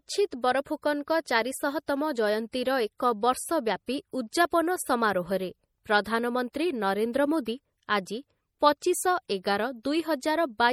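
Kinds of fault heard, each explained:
MP3 compression: The speech carries plainly audible coding damage, likely from MP3 encoding at a rate that fits roughly 48 kbps. Weak frequency lines are dropped frame by frame. On a spectrogram, the weaker bands show flickering gaps, and nothing appears above 18.2 kHz.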